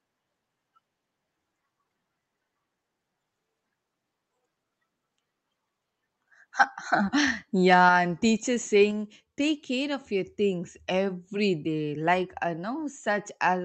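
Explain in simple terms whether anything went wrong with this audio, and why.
Two things went wrong, both around 7.7 to 7.9 seconds, just before "and teachers".

From 7.73 to 7.89 s the loudest moment turns harsh and crackly, with a rough, buzzy edge on top of the sound. This is microphone overload. The sound was briefly too strong for the recording equipment, so the tips of the loudest moments were cut flat instead of being captured fully. Only a small share of the sound is affected, but it is enough to be heard as distortion. The likely cause is the microphone's input volume being set too high.

Right after that, at 7.89 s, the level suddenly drops. Everything, including the background, becomes quieter in a single step, just before "and teachers". This is the microphone volume being stepped down. The call software noticed the overload and immediately turned the microphone's input down to prevent more crackling. 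That is likely why the drop follows the distortion so closely.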